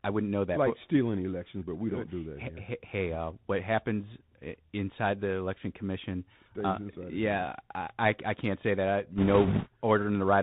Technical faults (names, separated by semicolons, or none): Bluetooth CVSD headset codec; bit errors on a Bluetooth voice link